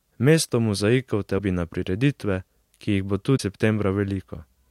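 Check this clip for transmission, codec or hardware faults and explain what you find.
Two brief disruptions break up the speech, and both point to one codec fault. A broken MP3 bit reservoir is the likely cause, at 1.37 to 1.40 s and again at 3.36 to 3.40 s. After a cut in the stream, the following frame reached back for borrowed bits and decoded bytes from a different frame. Each disruption is a skip forward in the audio, with a short chirp, burst of noise or hole right after the cut. The 30 and 44 ms spans fit one or two frames of about 26 ms each.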